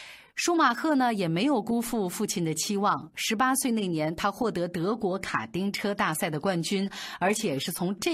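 From 4.72 s, an adaptive stream at a lower bitrate turns the treble synthetic without a gap; the spectrogram shows a sharp ceiling at 14.9 kHz.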